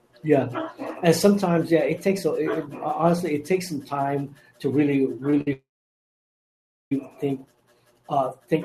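Right after "some time to really", the speech briefly hangs on its last sound at 5.30 to 5.33 s and again at 5.41 to 5.48 s, with a faint buzzy smear. These are short stalls from a late packet. The jitter buffer ran dry, so the receiver stretched the previous sound for about 21 ms and then 55 ms, resuming at the same point with nothing lost.

From 5.53 to 6.92 s the audio freezes. A brief buzzy continuation of the last sound fades into about 1.3 s of silence, and then speech resumes exactly where it stopped. This call audio freeze likely came from packets held up in transit, emptying the buffer and inserting a gap of about 1.4 s.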